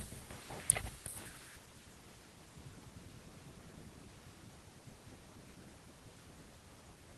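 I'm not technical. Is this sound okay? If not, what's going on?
Yes, nothing in this recording stood out as a problem when I listened to it.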